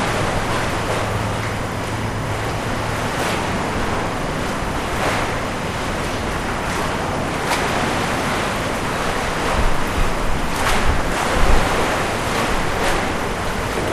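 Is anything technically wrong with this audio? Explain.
Yes. Throughout, a steady chirping warble sits behind the sound: timecode bleed, where 25-frame linear timecode, a square wave switching near 1 and 2 kHz, leaks in about 15 dB below the programme.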